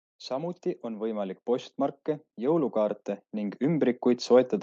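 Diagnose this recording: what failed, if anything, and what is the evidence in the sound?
Automatic gain rising in the call processing stage raised its gain on quiet input, swelling speech and background together by about 4 dB from 0.28 to 1.47 s, and again from 2.35 s to the end.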